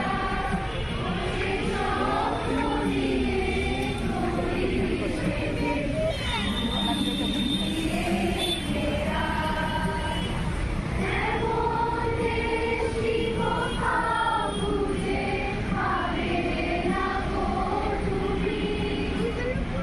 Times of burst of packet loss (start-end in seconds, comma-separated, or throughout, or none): none